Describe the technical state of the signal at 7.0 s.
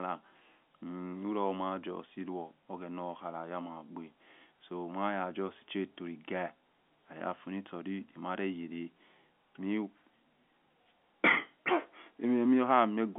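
At 7.0 s the audio is intact, with the expected telephone band of roughly 200 Hz to 3.5 kHz from G.711 A-law coding and nothing above 4 kHz.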